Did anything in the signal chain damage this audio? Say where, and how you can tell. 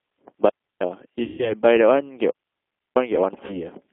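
Yes. At the codec stage, the whole clip passes through the G.729 codec. The audio is confined to roughly 250 Hz to 3.5 kHz and has a rough, synthetic texture, which fits an 8 kbit/s model-based coder. Unlike a plain band-limit filter, it rebuilds each 10 ms frame from a filter and a few pulses rather than keeping the waveform.

At the radio-link stage, there are two digital wireless dropouts. From 0.49 to 0.81 s and from 2.30 to 2.96 s, the sound falls into clean holes of near silence lasting about 0.32 s and 0.65 s. The receiver muted with a quick fade. No noise burst or buzzy tail surrounds these holes, which separates them from codec concealment.

At the network stage, there is VoIP packet loss concealed by the speech codec, from 1.24 to 1.54 s and from 3.46 to 3.60 s. Here 140 ms and then 40 ms of audio went missing, and the decoder stretched its last frame into a fading buzzy tone or coloured noise instead of silence. 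The sound stays weak briefly afterwards because each frame builds on the last.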